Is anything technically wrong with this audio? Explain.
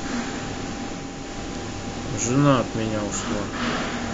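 Yes. Digital radio blending to analogue, 0.91 to 3.77 s: the receiver loses the digital signal and cross-fades over 0.43 s to FM, adding faint hiss and about 1 dB lower level.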